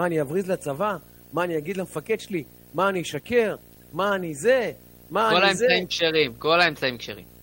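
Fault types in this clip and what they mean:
Video or display buzz: a screen or video cable is coupling its scanning signal into the audio path, so the picture's timing leaks in as noise under the speech. Throughout the clip there is a steady buzz at the 59.94 Hz field rate with a gritty hash riding above it, plus a thin, very high tone at 15.7 kHz from the line scan, all sitting roughly 20 dB below the speech.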